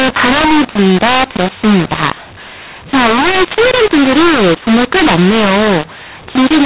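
Throughout, the speech sounds harsh and distorted, with pauses filled by noise: a mu-law and A-law mix-up, where mu-law telephone audio was decoded as A-law.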